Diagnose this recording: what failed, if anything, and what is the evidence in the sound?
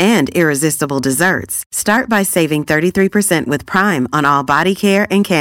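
Hard clipping, likely at a gain or converter stage, throughout: peaks overdriven by about 5 dB are cut flat and crackle. The waveform shows squared tops, and the spectrogram shows vertical high-frequency streaks.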